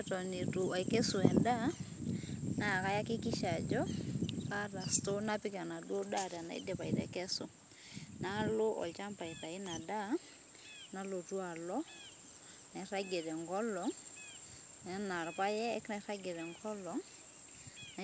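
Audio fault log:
No faults found; the speech reaches the listener over a WebRTC call path whose band stops at 8 kHz, which fits a wideband codec such as G.722.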